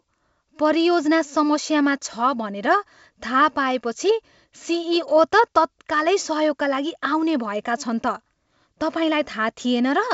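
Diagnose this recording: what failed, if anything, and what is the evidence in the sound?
Nothing has failed here: the speech carries the wideband character of G.722 telephone coding, consistent with its full 64 kbit/s mode, and the coder leaves at most a faint trace on the sound.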